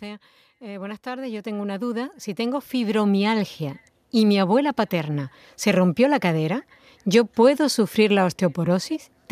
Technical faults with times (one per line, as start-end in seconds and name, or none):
0.05-3.59 automatic gain rising